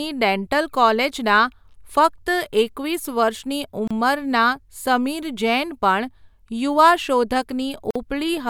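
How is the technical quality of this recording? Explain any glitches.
The recording has two brief silences where separately encoded pieces were joined. A gap at a join of encoded pieces opens at 3.88 to 3.91 s (about 31 ms) and again at 7.91 to 7.96 s (49 ms), four seconds apart. Untrimmed encoder delay and end padding leave silences with smeared edges, but the sound resumes exactly where it stopped, unlike a dropout that loses material.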